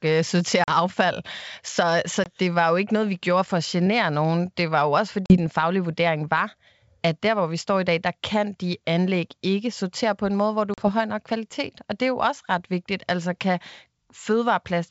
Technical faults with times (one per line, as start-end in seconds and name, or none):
0.64-0.70 packet loss on an ADPCM call
2.24-2.29 packet loss on an ADPCM call
5.26-5.37 packet loss on an ADPCM call
10.74-10.90 packet loss on an ADPCM call